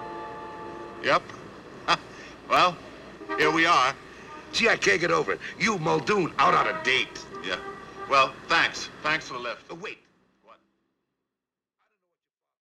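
Three sharp, isolated clicks occur at 2.57 s, 3.42 s and 11.10 s. Each is a single tick with a thin vertical streak across the spectrum. The likely cause is dropped samples: a fraction of a millisecond of the stream goes missing, so the waveform jumps straight to a later value. The gap is far too short to remove any audible sound. The last click falls during the smooth fade-out that runs from about 9 s to the end.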